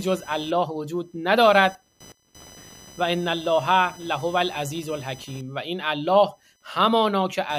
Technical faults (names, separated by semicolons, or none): computer activity noise